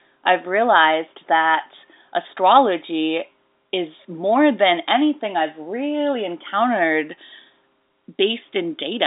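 No technical faults can be heard in this speech, which carries the narrow 250 Hz to 3.7 kHz band of a G.711 telephone line working as that path normally does.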